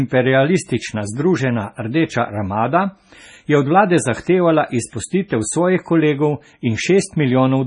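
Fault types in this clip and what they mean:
MP3 compression: throughout this speech clip the sound turns watery and swirly, with weak frequency lines flickering on and off between frames, and nothing is heard above about 10.5 kHz. The damage is heavy and points to a low bitrate near 24 kbps. This is likely MP3 coding; the fixed treble ceiling plus flickering artefacts distinguishes it from simple low-pass filtering.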